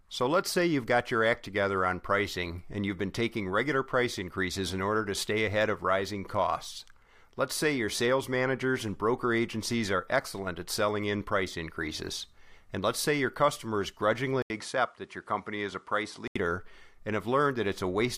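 Input switched to a poorer device, from 14.42 to 16.36 s: right after "let's say your customers", the speech drops out for 80 ms and then returns duller and boxier, with nothing above 11.4 kHz. The likely cause is the system moving its input in mid-recording to a lesser microphone or a headset's call profile, which passes a narrower band. The loudness stays about the same, but a faint new background noise, roughly 45 dB down, comes in with it.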